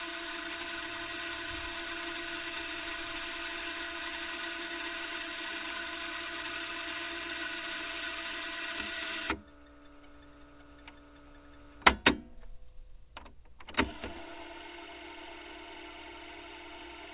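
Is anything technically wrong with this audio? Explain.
No, nothing in this recording of sounds is technically wrong. It has passed through a WebRTC call path whose content stops at 4 kHz, a narrowband limit that fits a G.711 mu-law telephone codec.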